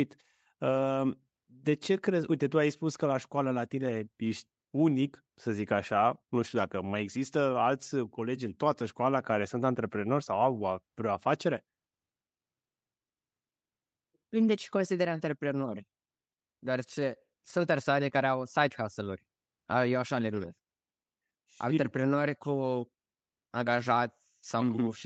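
No faults in the speech; the call microphone processing and WebRTC call path are as expected, with content ending at 8 kHz, consistent with a wideband Opus call.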